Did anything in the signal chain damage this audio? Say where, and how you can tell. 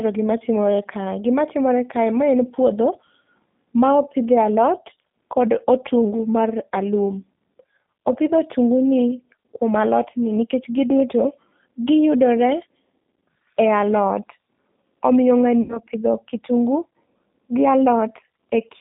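Yes, at two stages. The codec shapes the whole clip: the speech is confined to roughly 150 Hz to 3.7 kHz and has the slightly rough, synthetic grain of G.729 coding, which fits an 8 kbit/s rate. Unlike a plain telephone band-limit, the damage is audible inside the passband as a parametric, buzzy texture, because the decoder rebuilds speech from a vocal tract filter, pitch prediction and sparse pulses rather than passing the waveform.

At the network stage, VoIP packet loss concealed by the speech codec occurs from about 15.62 to 15.80 s. The voice smears into a decaying buzzy tone or coloured noise as the decoder extrapolates its last pitch and filter, which fits about 70 ms of lost audio, or seven 10 ms frames. The degradation outlasts the gap, because each frame depends on the previous one. That recovery tail sets it apart from a dropout or a buffer underrun, which leaves silence or a click and then resumes cleanly.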